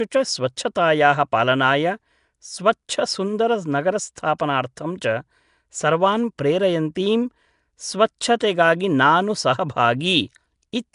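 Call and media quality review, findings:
Nellymoser compression, throughout: rough hissy halo, smeared underwater tone, nothing above 10.6 kHz. Likely Flash-era Nellymoser Asao, around 44 kbps; weak bands get no bits and are filled with noise.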